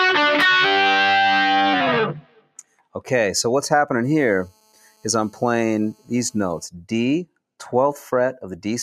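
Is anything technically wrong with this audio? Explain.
Yes. Three problems can be heard.

A noise suppressor designed for speech runs on this material for its whole length. It treats sustained tones, ambience and decaying tails as noise and pulls them down, while sharp onsets pass. The level swings by around 10 dB as the suppressor keeps changing its mind. The result is a pumping, fluttering sound that keeps thinning out.

At three points the suppressor cuts the sound much harder than elsewhere. From 2.19 to 3.0 s it drops by as much as about 19 dB, over roughly 0.7 s. From 4.5 to 5.05 s the dip reaches about 13 dB, lasting about half a second. From 5.94 to 6.11 s it falls about 15 dB, briefly. Held and fading parts sink or are cut short, like holes in the sound.

From 4.03 to 6.66 s there is GSM phone buzz. A nearby 2G phone on a call transmits in bursts 217 times a second. The audio circuitry rectifies those radio pulses. 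The result is a hard, raspy buzz at 217 Hz, rich in harmonics, sitting about 26 dB below the signal. It stays nearly steady and has no relation to the material.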